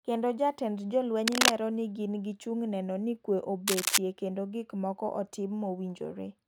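From 1.27 to 1.54 s and again from 3.67 to 3.98 s, cable scratch noise sits over the speech: dense, ragged bursts of scratching somewhat louder than the speech itself. This likely comes from a worn cable or connector being moved, its contact resistance fluctuating rapidly.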